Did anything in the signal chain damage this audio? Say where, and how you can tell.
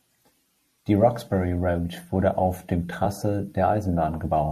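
Yes. Damaged data in the compressed stream, at the codec or storage stage: a corrupted stretch of the encoded file derailed the decoder at 3.04 s, just after "wurde auf dem". The speech gives a brief glitch while the decoder resynchronises on the next valid frame.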